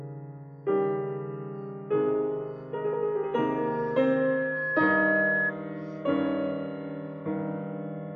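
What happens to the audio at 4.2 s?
At 4.2 s a single piercing tone near 1.7 kHz is swelling over the music. It rises over roughly a second and a half and ends up about 5 dB louder than the music itself. This is loudspeaker feedback squeal, lasting from 3.56 to 5.52 s. A microphone is picking up the loudspeaker it drives, and at 1.7 kHz the loop's gain exceeds one. That frequency then feeds on itself, growing into a howl until the loop is broken.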